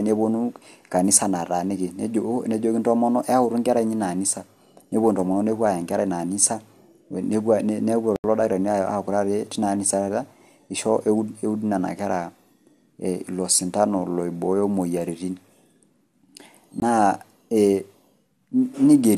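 At 8.16 s the speech output was replaced by zeros for 80 ms, a block of digital silence running to 8.24 s. Because the sound drops straight to nothing and returns without any fade, the gap is heard as a short hole. A second block of digital silence, only 20 ms long, falls at 16.80 to 16.82 s, heard as a very short hole.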